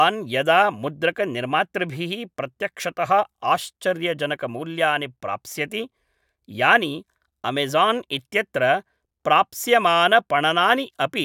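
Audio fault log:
Nothing in this speech recording registers as a fault. There is no entry to log at any point in it.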